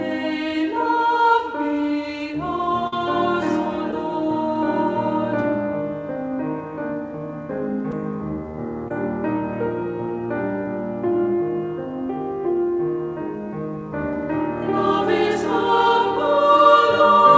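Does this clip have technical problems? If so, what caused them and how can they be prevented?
Yes. From 2.87 to 3.00 s there's a burst of packet loss. About 60 ms of audio never arrived, so the receiver stretched the last sound for around 50 ms while fading it, then jumped ahead with that stretch gone. A steadier network path or a deeper jitter buffer would help prevent it.

There's also short concealed packet loss at 3.91 to 3.93 s, 7.91 s, and 8.88 to 8.91 s. Each time, 10 to 20 ms went missing and the decoder patched the hole by continuing the previous sound, so you hear a brief smear or wobble. Forward error correction or a more generous jitter buffer would mask these.

The G.722 call path, which has nothing above 8 kHz, isn't part of the problem.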